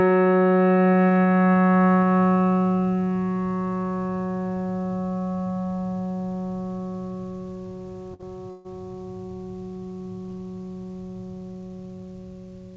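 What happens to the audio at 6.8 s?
At 6.8 s the music is caught in gain pumping, which runs through the whole clip rather than starting there. The level drops sharply as every loud hit arrives, a swing of roughly 10 dB. Loud and soft passages sit unnaturally close together, so the music sounds squashed and breathing. The likely cause is input gain set far too high, with a fast limiter pulling it down on each peak. The call path's 8 kHz top limit is heard as missing air above that point.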